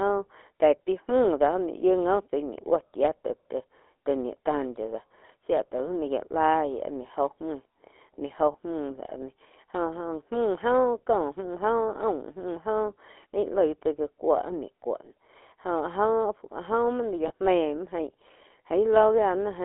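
GSM full-rate codec coding runs through the whole speech clip, with a buzzy, gravelly roughness consistent with the 13 kbps full-rate mode. The speech is rebuilt from a vocal-tract model driven by sparse pulses, and the line band limits it to 300 Hz to 3.4 kHz; the damage is plainly audible.

Lost GSM frames occur at 8.52 to 8.56 s and again at 17.28 to 17.32 s, each about one 20 ms frame. The decoder fills each gap by repeating the previous frame's settings, producing a brief metallic, ringing smear.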